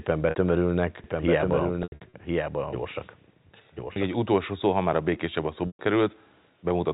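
Packet loss with pitch repetition first appears at 0.30 s. A 60 ms gap is bridged by repeating the last pitch period, which sounds like a briefly held, buzzy tone.

From 1.04 s to 4.14 s, ending just before "utolsó szó ha már", a doubled audio track runs. A dry, full-band copy about 5 dB quieter trails the original by about a second and starts and stops abruptly. The likely cause is a second, slower capture path mixed back in.

Within that span, more losses scatter across 1.83 to 2.13 s, where the longest 90 ms run fades toward silence, and a 30 ms loss at 3.93 s leaves a short held buzz. After "már a békésebb a", a 120 ms loss at 5.67 s fades out, and the speech returns with a quick cross-fade. All of this stays within the telephone band below 4 kHz.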